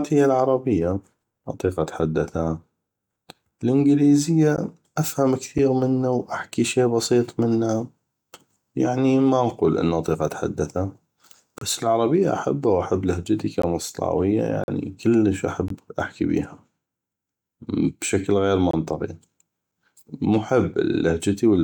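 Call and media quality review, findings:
Gap between stream segments: segment timestamps fall short at 1 s boundaries, and the player pads each shortfall with silence. Hard-edged dropouts at 4.56, 5.58, 11.58–11.61, 13.62 (after "العربية احبه واحب لهجتي"), 14.64–14.68, 15.68 (before "احكي بيها"), 18.71–18.73 (after "بشكل غير") and 19.72 s. Lengths range from 6 ms to 44 ms. The speech stops abruptly and then resumes. No content is lost, but the timing is stretched. Component: segmenter/packager timestamp alignment.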